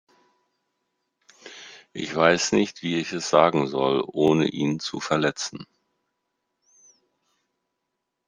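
Overlapping chunks at 1.25–1.28, 4.28–4.30 and 7.30–7.32 s in this speech clip: each 3-second chunk starts 23 ms early, replaying that sliver as a regular stutter.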